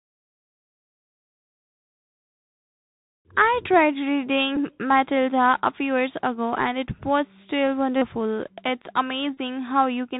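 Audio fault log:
Throughout: Bluetooth CVSD headset codec. The speech is squeezed below 4 kHz, with a grainy hiss underneath, scratchy s sounds, and loud bright bits distorting as the one-bit steps can't keep up.
4.56, 7.96 to 8.03, 9.35 to 9.37 s: Bluetooth headset packet repeated. The last good packet gets decoded again in place of lost ones, giving a short buzz near 267 Hz in each run.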